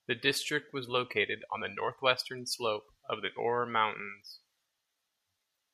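No technical faults can be heard anywhere in this speech recording. At no point does the sound break down or change in an unexpected way.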